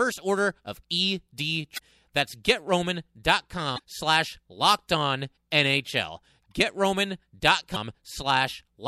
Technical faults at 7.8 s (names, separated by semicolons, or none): damaged data in a compressed stream